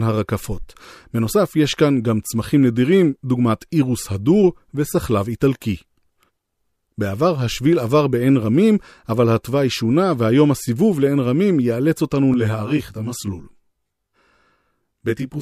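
From 12.34 s to the end, channel delay (comb filtering) sets in. One channel lags about 20 ms. Summed to mono, the speech sounds rough and slightly doubled.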